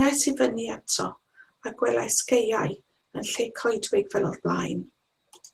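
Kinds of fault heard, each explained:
Opus voice compression: the speech turns hoarse and a bit robotic from coarse low-band coding with a thin upper layer, which fits a low rate around 16 kbps.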